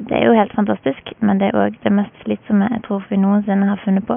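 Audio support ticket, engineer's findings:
Engineer's findings: no fault found in the speech, with only the room's own background noise audible, about 34 dB below it.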